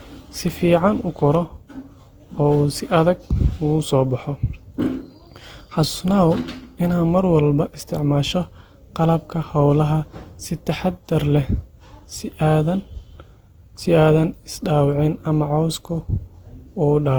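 Throughout the speech, the audio has likely been decoded and re-encoded about five times with a lossy codec. Each pass requantises on a shifted frame grid, so noise and spectral gaps pile up. The character fits Opus at around 48 kbit/s, yet it sounds more swirly, smeared and hollow than that rate alone would give, with blurred attacks.

At 1.35 s there is an electrical switching spike, likely from a nearby switch, motor or static discharge arcing and being picked up by the audio line. It lands as a sharp snap or tight cluster of clicks laid over the speech.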